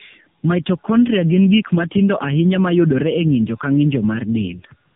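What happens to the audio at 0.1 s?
At 0.1 s the speech already carries tandem speech coding, which runs through the whole clip. It sounds like two narrowband low-rate coders in a row, the second recoding the first's damage. The result is rough, muffled and warbly, with nothing above 3.7 kHz.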